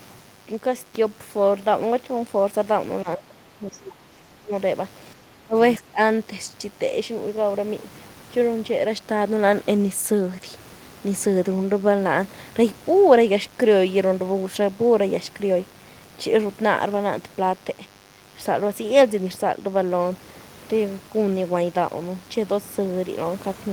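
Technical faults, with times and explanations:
Throughout, mains buzz: a steady, raspy buzz sits under the speech at about 30 dB below it, built on 50 Hz mains. It isn't a clean hum. It has a gritty edge because sharp switching spikes get in twice per mains cycle, from something like a dimmer, a rectifier or a missing shield. Those spikes throw harmonics of 50 Hz well up into the kilohertz range, so the buzz comes across as fizzy rather than as a low tone.
3.03–4.53 s, 5.23–5.55 s and 5.78–5.99 s, speech suppressed in double talk: the talker's level sags hard in these three stretches. The first runs about a second and a half and drops roughly 25 dB at its deepest. The two shorter ones, around a third and a fifth of a second, drop about 20 dB. This is likely the echo canceller getting confused while both sides talk at once. It can't separate its own talker from the loudspeaker echo, so it turns everything down.
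3.72 s, other side's voice leaking through: inside that first dip there's a brief scrap of a second voice, only about 70 ms long and roughly 25 dB below the talker. It's faint and clipped short. That's likely the far end's audio playing on the talker's loudspeaker and getting back into the microphone, with the echo canceller failing to remove all of it during the double talk.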